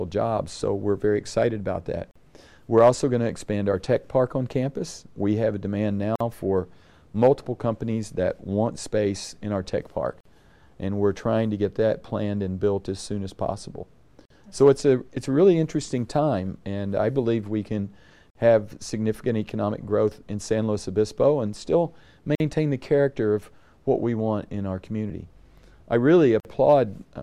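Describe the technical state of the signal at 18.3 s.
At 18.30 s the sound drops out for about 49 ms, ending at 18.35 s: a gap at a join of encoded pieces. Two separately encoded segments were butted together without trimming the encoder's start-up delay and end padding, so that silence stays in. The sound resumes exactly where it left off, and such joins recur every 4.0 s. A waveform shows a flat notch with abrupt, slightly smeared edges; a spectrogram shows a narrow empty vertical band across all frequencies.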